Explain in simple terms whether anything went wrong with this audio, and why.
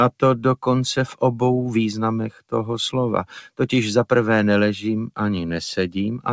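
Something did go wrong here. A noise suppressor applied to music or sounds was left running the whole way through, and it's built for speech. It treats held, steady parts as background noise and keeps nudging them down, so the audio pumps and thins while sharper attacks slip through.

The worst moment is between 2.31 and 2.53 s, where a sound was cut by the noise suppressor. For a brief stretch the suppressor decided that sound was noise and pulled it down noticeably harder than everything around it, so it dips.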